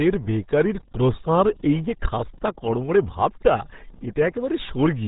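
From start to finish the speech sounds muffled and gargly, boxed into a narrow band with nothing audible above 3.8 kHz, and the heavy smearing makes consonants blur and vowels churn. That is the signature of the RealAudio 14.4 codec, the RealAudio 1 scheme built for dial-up modems, and the damage fits an 8 kbit/s stream: at so low a rate the encoder discards the upper band entirely and rebuilds the rest coarsely.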